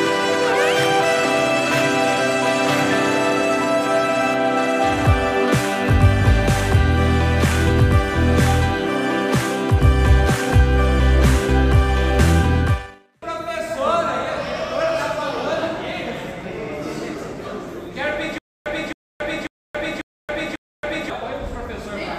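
From 18.38 s to 21.1 s a stutter with silent gaps: one 0.27 s fragment repeats five times, each followed by 0.28 s of digital silence, every 0.54 s. The likely cause is a stalled stream replaying its last buffer on each retry, losing that span's audio.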